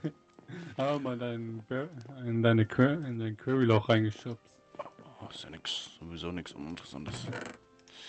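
No technical faults can be heard in this audio. It has passed through a WebRTC call path with an Opus-style codec, so its top end stops at about 8 kHz and it carries the coding texture typical of a call.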